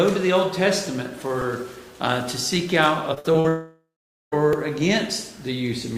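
At 1.41 s there is a repeated buffer: a sliver of about 2.67 ms, which fits a 128-sample buffer, plays three extra times back to back because fresh audio was late reaching the output. With pieces this small, the hard joins merge into a click or brief buzz. Nothing is skipped afterwards. That is what separates it from packet loss, where material actually goes missing.

From 3.14 to 3.46 s comes repeated packet loss with a robotic sound. Four separate holes open in quick succession, the longest about 57 ms. Each is patched by stretching the preceding sound, so about 140 ms is concealed, roughly 44% of the stretch, while the real content there is gone. The result is choppy, with pieces missing. Unlike a long dropout, the real signal keeps returning between the gaps.

Right after, from 3.48 to 4.34 s, comes a long network dropout. The likely cause is a stall in which no audio arrived for about 840 ms. 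The last sound carries on as a buzzy tail that decays, then about 450 ms of near silence follows before the audio resumes further along, with that whole stretch lost. It is one continuous hole rather than a train of short ones.

At 4.53 s a second repeated buffer occurs, a 2.67 ms piece played two extra times. It is heard as a brief click, again with no audio lost.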